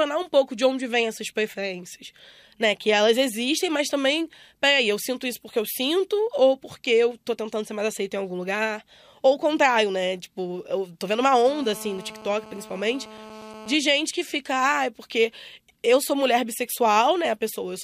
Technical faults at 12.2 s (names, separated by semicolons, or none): GSM phone buzz